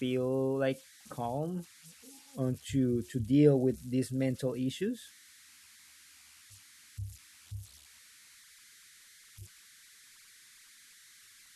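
Right through the clip there are converter idle tones: an undithered converter cycling on quiet input, leaving a whistle around 2 kHz in pauses, about 26 dB under the speech.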